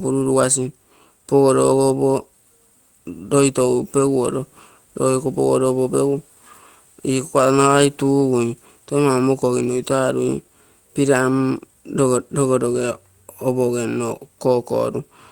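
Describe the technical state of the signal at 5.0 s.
At 5.0 s the speech signal is intact, with no audible fault at that moment.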